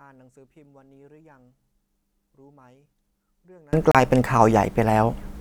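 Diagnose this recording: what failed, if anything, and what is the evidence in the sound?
From the start to 3.73 s the speech sits about 36 dB down and sounds faint, which is what you get when the two sides cancel. That points to analogue wiring or a mixing stage, likely one channel inverted: with one side's polarity flipped, everything common to both, centred speech and low end included, cancels on a mono sum, leaving only the faint difference between channels. After 3.73 s it comes back to full level.

Then there's a short dropout from 3.91 to 3.95 s, a 32 ms hole of silence, after which the speech simply carries on. That's a playback-side wireless problem, likely a Bluetooth stall: interference delayed packets, the headphone buffer emptied and output paused until the resent data arrived. The gap is brief silence, so it reads as the stream running dry rather than damaged audio.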